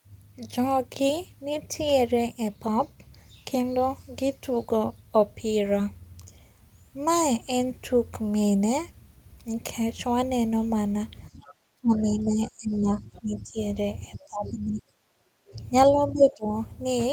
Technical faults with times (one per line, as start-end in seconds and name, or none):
11.32-13.59 speech suppressed in double talk
11.44-11.54 other side's voice leaking through
13.15-13.21 other side's voice leaking through
14.16-15.56 speech suppressed in double talk
15.91-16.54 speech suppressed in double talk